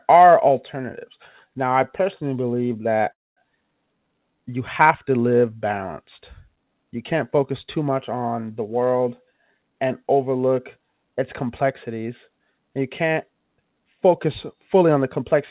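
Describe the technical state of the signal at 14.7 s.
At 14.7 s the speech is inside a jitter buffer speed-up that runs from 14.53 to 15.35 s. The receiver's buffer had built up more audio than its target. To catch up, it cut out short pieces one or a few pitch periods long, over and over. Roughly 70 ms goes missing across the span. Playback runs at about 107% speed with unchanged pitch, so the speech sounds hurried. The telephone-band sound, with nothing above 4 kHz, fits a G.711 call path.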